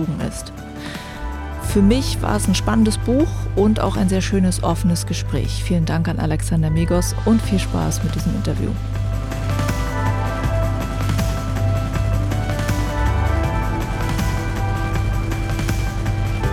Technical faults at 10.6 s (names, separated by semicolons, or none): mains hum